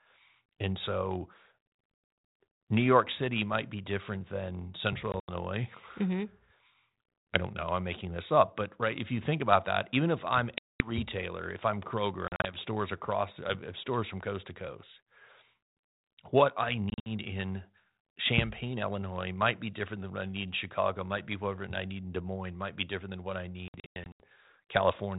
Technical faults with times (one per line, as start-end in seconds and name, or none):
2.30-2.34 packet loss on an ADPCM call
5.12-5.30 packet loss on an ADPCM call
10.58-10.92 packet loss on an ADPCM call
12.28-12.54 packet loss on an ADPCM call
16.90-17.16 packet loss on an ADPCM call
23.68-24.20 packet loss on an ADPCM call